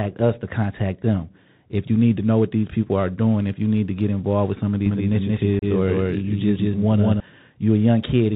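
Bluetooth CVSD headset codec damage runs through the whole speech clip. The sound points to a 64 kbps CVSD link, which encodes each sample as a single up-or-down bit and adapts its step size. Nothing above 4 kHz survives, so the speech is narrow and boxy. Sharp, loud high content outruns the step size and distorts, sibilants come out scratchy, and a granular hiss sits under everything.

A doubled audio track appears from 4.86 s to 7.20 s, just after "involved with some of". A second full-band copy of the speech trails the first by roughly a fifth of a second at about the same loudness. This was likely caused by the same signal being captured again through a slower path. The copy has no reverberant tail or room colour, and it cuts in and out abruptly rather than fading.

Unconcealed Bluetooth headset packet loss opens a 30 ms hole from 5.59 s to 5.64 s, inside the doubled stretch. A handful of short voice packets between headset and phone never arrived, and silence or an idle pattern took their place. 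The gap has hard edges that can click. Because the CVSD decoder's step size collapses during the dropout, the speech returns quieter for a moment before it recovers.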